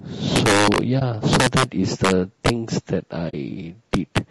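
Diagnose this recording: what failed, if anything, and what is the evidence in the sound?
At the codec stage, the speech is rough and grainy from start to finish, with noise filling the gaps between harmonics and a thin, synthetic top band. This is likely low-delay AAC compression (AAC-ELD) at a low bitrate, which fits about 32 kbps. Its short frames blur pitch structure, unlike broadband hiss, which would sit evenly under the sound.

In the sample-format or gain stage, integer overflow produces violent cracks at 0.36–0.78 s and 1.33–1.63 s, where peaks exceed the limit by about 8 dB. Further cracks follow at 2.05–2.49 s and 3.94–4.18 s, at about 4 dB over. The peaks wrap to the opposite sign instead of flattening, so these bursts sound far harsher than clipping.

In transmission to the decoder, AAC frame loss with muting opens a brief dip at 0.99–1.02 s, which fits one lost frame, and a soft-edged hole at 3.29–3.34 s, which fits two. 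The decoder zeroed the missing spectrum, and overlapping windows fade the sound out and back in.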